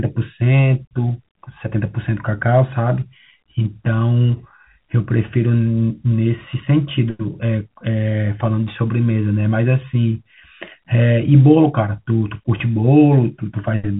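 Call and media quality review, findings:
No faults found in speech.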